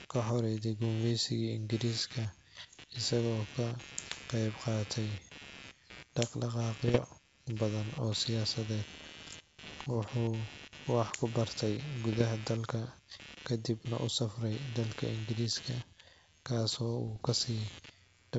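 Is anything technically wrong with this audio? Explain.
Yes, there are two problems in this speech recording.

Computer activity noise runs through the whole clip. Changing load on the processor, graphics card or mouse shifts the ground that the audio circuit shares with the computer. That puts a buzzy, scratchy pulsing at roughly 150 Hz on top of the speech, about 20 dB below it. It rises and falls with whatever the machine is doing, not with the talking, so it stays under pauses too.

Bit errors on an ADPCM link appear from 6.86 to 7.05 s, 9.63 to 9.93 s, 12.13 to 12.24 s and 17.06 to 17.25 s. In each burst a few bits in a thousand are flipped. Every wrong bit also throws off the decoder's step size and prediction, so the damage rings on for milliseconds after it. These stretches sound like pops and rough, gritty bursts with brief jumps in level. The wideband telephone coding itself sounds like clean G.722, with speech extending well above 4 kHz.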